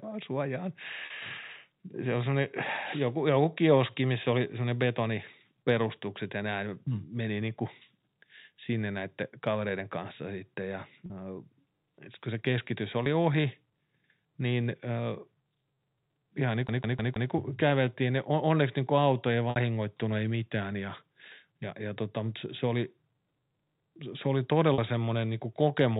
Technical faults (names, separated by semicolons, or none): packet loss with pitch repetition; CD stuck on one turn